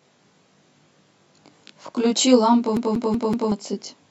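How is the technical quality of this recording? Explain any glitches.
The recording has two clear faults: a rough, slightly doubled coloration across the whole speech clip, and a skipping-CD stutter near the end.

Channel delay (comb filtering) is present throughout. One channel arrives late by roughly 20 ms, and when the two are summed to mono, the shared content cancels at evenly spaced frequencies. The first notch sits around 30 Hz, and further notches repeat closely up the spectrum. The result is a rough, slightly doubled speech tone that persists throughout.

The CD stuck on one turn runs from 2.77 to 3.52 s. A scratch makes the laser jump back to the same point on each rotation, so a 188 ms slice of audio plays four times in a row with a brief mute at every jump. You hear a fast, mechanical, evenly timed stutter, and the speech does not move forward until the loop releases.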